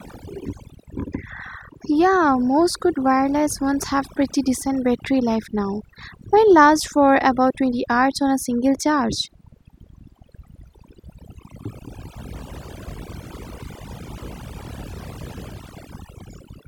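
From start to finish the speech carries overdone noise removal: a noise reducer set far too aggressively kept switching individual frequency bands down or off wherever they sat close to its noise estimate, taking quiet parts of the voice along. Pauses fall to near silence dotted with twinkling specks. Unlike a noise gate, which mutes everything at once, this thins the sound band by band, even during speech.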